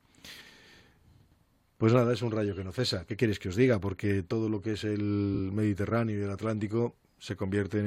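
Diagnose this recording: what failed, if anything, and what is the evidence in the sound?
Network stage, frames out of order at 0.41–0.52 s: two 46.4 ms blocks play swapped, giving a garbled flutter. Unlike a dropout, nothing is missing.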